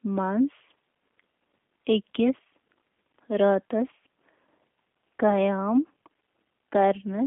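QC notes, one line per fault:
Throughout, G.729 codec: the speech is held inside a narrow telephone band of roughly 200 Hz to 3.5 kHz, with nothing above 3.5 kHz, so consonants lose their edge. Plainly audible codec damage gives a slightly rough, synthetic texture. The codec discards the waveform and rebuilds each short frame from a vocal tract filter, a pitch predictor and a few pulses, a character that fits G.729A running at around 8 kbit/s.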